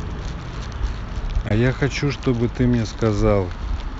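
At 1.48 to 1.51 s the speech drops to silence, then resumes further on. This is likely a Bluetooth dropout, which fits one lost packet.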